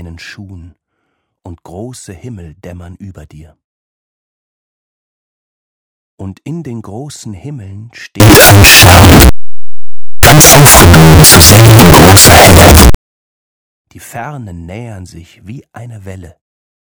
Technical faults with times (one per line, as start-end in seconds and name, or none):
8.20-12.95 signed and unsigned mixed up